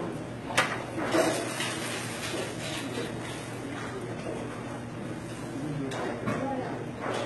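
Throughout, the audio was likely squeezed through HE-AAC compression at a very low bitrate, consistent with about 16 kbps, so its treble is synthesised from copied lower bands. The result is heavy damage: a gritty, metallic top end that stops dead above 11.8 kHz.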